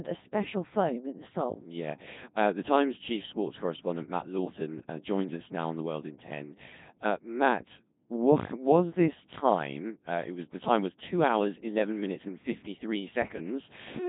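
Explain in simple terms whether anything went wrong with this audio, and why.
The speech went through a Codec 2 vocoder, a very low-rate digital-radio codec that keeps only pitch, energy and a rough outline of the voice, then rebuilds it from sine waves. Throughout the clip this heavily damages the speech, leaving it robotic and buzzy, with nothing above 3.8 kHz.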